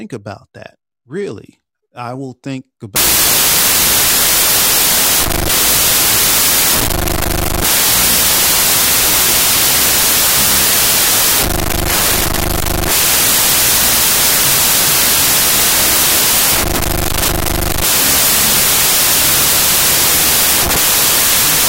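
From 2.96 s to the end, the speech sinks into a loud wash of harsh noise, with the original buried inside it, slowed to half speed and dropped about an octave in pitch. This is a wrong sample width fault. Audio stored as 32-bit integers is being read as 16-bit integers, so every real sample splits into two. The upper half still traces the signal, while the lower half is essentially random, and the doubled sample count halves the playback rate.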